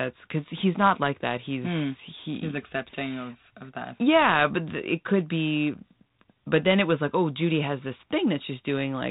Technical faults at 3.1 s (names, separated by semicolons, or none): none